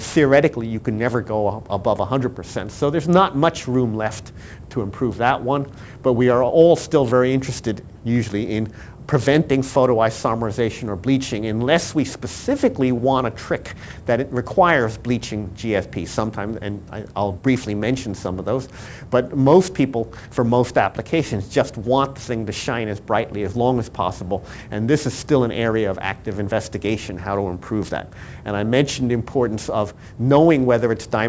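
Aliasing runs throughout. Content above 8 kHz folded back into the band, a drop from 44.1 kHz to 16 kHz without a filter. High detail sounds gritty and metallic.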